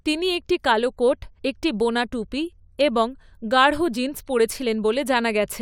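Nothing in this speech recording points to a technical fault anywhere in the signal.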